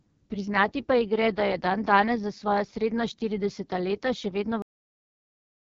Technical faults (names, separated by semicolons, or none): AMR wideband (HD Voice) codec; cut-off end